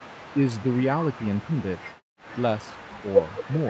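A speech recording from a call, with nothing above about 8 kHz from the call's microphone processing, shows speech suppressed in double talk at 0.0 to 0.07 s, 0.33 to 0.8 s, 1.09 to 1.78 s, 2.71 to 2.77 s and 3.01 to 3.69 s. The voice dips by roughly 40 dB in the first brief event, roughly 15 dB in the middle two and roughly 10 dB in the last two, likely because the echo canceller mistook overlapping far-end speech for echo and attenuated the talker. Between 2.0 and 2.27 s the background is gated by the echo canceller: the room sound drops by about 40 dB for roughly a fifth of a second while the loudspeaker plays, then returns when the canceller releases the microphone.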